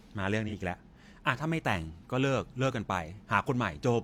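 A brief smeared, noisy and phasey patch interrupts the speech from 0.48 to 0.52 s, lasting about 43 ms. This is AAC frame loss with concealment: the span fits one lost AAC frame, and the decoder covered the gap by reusing the previous good spectrum with altered phase and interpolated energy. Because the gap is so short, no fade into silence occurs, only a momentary blurred texture.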